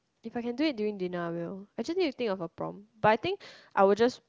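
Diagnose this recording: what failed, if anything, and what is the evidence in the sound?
Nothing failed here: the speech comes through the AMR wideband (HD Voice) codec at what sounds like one of its top rates, around 23 kbit/s, and nothing from the wiring through to playback gives anything to diagnose.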